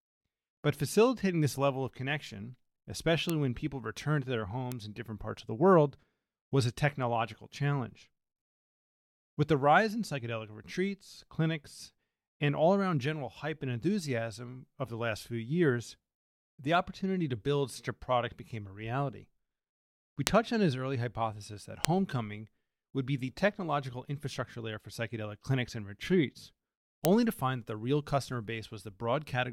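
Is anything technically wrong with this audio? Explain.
Yes. The speech carries five bit error spikes, at 3.30, 4.72, 20.27, 21.85 and 27.05 s. Each is a single bit flipping in the stored or transmitted samples, throwing the value by a power of two for an instant before it snaps back. The peaks reach about -8, -14 and -2 dBFS, and the last three are the loudest. Each is heard as one dry, broadband tick that ignores whatever the speech is doing. Unlike an edit click or a dropout, nothing around the tick is disturbed, and the jumps are short enough to suggest only one to three samples were hit.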